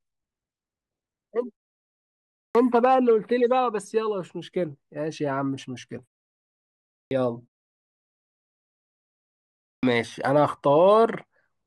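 Speech with clipped starts after pauses at 2.5, 7.06 and 9.78 s. Each follows a silence of 1 to 2.4 s. About 50 ms of onset is lost, so the sound begins abruptly. The output device sleeps in silence and is slow to wake.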